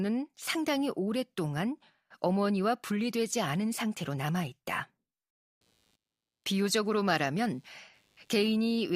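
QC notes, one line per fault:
5.61–8.95 s: computer activity noise. A faint buzzing chirp, pulsing at around 100 times per second and roughly 45 dB below the speech, runs to the end of the clip. Processor or peripheral load is modulating the shared audio ground, so the buzz follows machine activity, not the speech.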